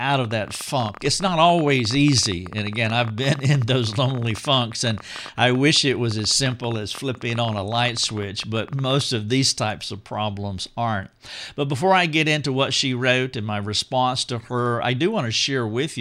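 A train of clicks runs through the first part of this speech recording, from 0.10 s to 9.02 s. The clicks arrive at about 14.7 per second, with irregular spacing, so the ticking sounds uneven rather than metronomic. There are about 150 in all. Their peaks reach about 5 dB above the speech, and they are heard even in pauses. They stop just before "of these types of". The likely cause is electrical interference or a faulty connection or power supply.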